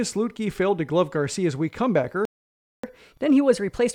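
At 2.25 s the speech just cuts out and the line sits silent until 2.84 s, a gap of about 0.58 s. That's a playback stall, likely the player running dry on data or its thread getting blocked, so nothing reached the output.

From 2.84 s to the end, the catch-up at higher speed kicks in. The player is burning through its backlog at 1.15 times normal speed by resampling, so the speech comes out quicker and lifted by about two semitones, a touch chipmunky.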